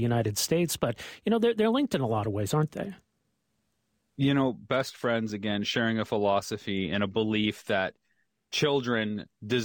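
Nothing here trips any alarm, since the speech runs along without a single glitch, dropout or oddity worth pointing to.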